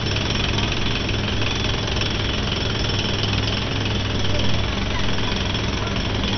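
Everyday sounds run throughout with nothing above 6.1 kHz, a dull, gurgling, granular texture, and flickering upper bands, likely MP2 compression at a low bitrate, around 48 kbps. A spectrogram shows a hard ceiling at 6.1 kHz and patchy, blocky sub-band energy beneath it.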